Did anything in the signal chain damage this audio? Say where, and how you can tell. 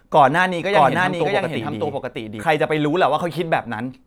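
Yes. A doubled audio track runs from 0.73 to 2.43 s: a dry, equally loud copy trails by about 0.7 s, starting and stopping abruptly. A slower second capture path is the likely cause.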